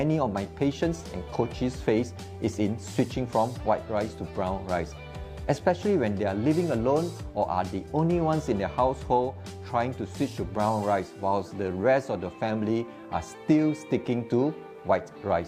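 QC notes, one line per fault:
No faults found on review; nothing to log.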